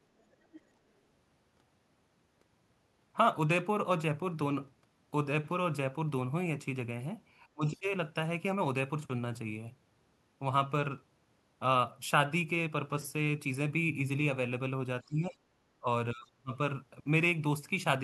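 From 0.19 to 0.61 s a faint second voice, about 20 dB under the speech, comes through, likely the other side's voice leaking through from a loudspeaker the echo canceller missed. On a spectrogram it shows as a weak, separate harmonic pattern.

Between 7.53 and 7.86 s the speech drops by roughly 30 dB, likely speech suppressed in double talk. A brief scrap of what is likely leaked voice, around 25 dB down, appears at 7.72–7.78 s. The waveform shows sudden notches in the envelope.

The same suppression, likely from double talk again, returns at 15.03–15.49 s (around 25 dB), at 15.8–15.86 s (shallower, around 15 dB), and at 16.12–16.52 s (deepest, near 40 dB). Each appears as a gap or a dulled high band on the spectrogram.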